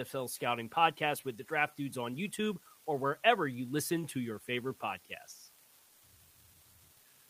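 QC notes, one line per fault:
throughout: unreliable data bit. One marginal bit flips at random, adding equal-sized spikes that crackle even in pauses; waveform shows uniform-height spikes, spectrogram broadband speckle.
throughout: clock drift between sender and receiver. The sender's clock runs roughly 3% slow, draining the buffer, so short pieces repeat; waveform shows small duplicated segments at uneven spacing.
0.18 to 7.29 s: repeated timing corrections. Unevenly spaced repeats stretch the sound to 97% speed, adding roughly a fifth of a second; spectrogram shows brief repeated slivers and a slightly dragging tempo.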